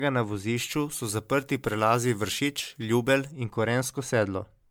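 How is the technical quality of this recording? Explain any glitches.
The technical quality is poor, with two faults. Throughout the clip the speech sounds swirly, smeared and hollow, with blurred consonant attacks and nothing above 19.9 kHz. That is likely generation loss, from running the audio through a 128 kbit/s MP3 encoder around seven times. Each pass quantises again on a shifted frame grid, so noise and spectral holes pile up. A single 128 kbit/s MP3 encode would sound far cleaner, and that difference separates this from ordinary low-bitrate coding.

From 0.57 to 3.31 s the speech turns thin, bright and sibilant, with the treble about 14 dB too strong at 10 kHz relative to 1 kHz. This is pre-emphasis left on: the boost matches the standard FM 75 µs curve, but the matching de-emphasis cut was never applied. Unlike a plain EQ boost, it rises along that fixed shelf shape. It also switches on and off at exact times instead of colouring the whole recording.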